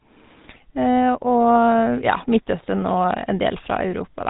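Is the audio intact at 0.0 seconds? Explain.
No. At 0.0 s the speech already carries GSM full-rate codec damage, present through the whole clip. The codec models the vocal tract and drives it with sparse, regularly spaced excitation pulses, which leaves a plainly audible buzzy, gravelly roughness and nothing above 3.8 kHz, consistent with a 13 kbps stream.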